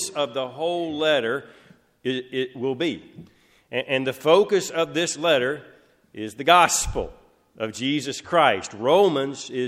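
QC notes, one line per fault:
8.08 to 9.47 s, channel delay (comb filtering): one channel slips about a single sample behind the other, and when they're folded to mono the first cancellation lands right up around 20 kHz, so you mostly hear the top end go a touch dull.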